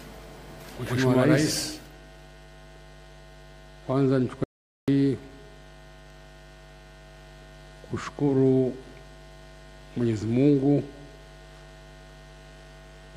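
The audio has one audio dropout to silence from 4.44 s to 4.88 s: the sound cuts off abruptly and returns just as abruptly about 0.44 s later, with nothing in between, not even room tone. On a waveform this shows as a flat line; on a spectrogram it is a fully black vertical band with sharp edges. Whatever occurred in that gap is lost, likely because the input signal was briefly interrupted while recording continued.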